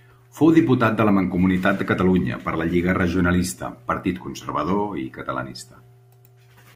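No technical faults can be heard in the speech recording; the signal stays continuous and steady throughout.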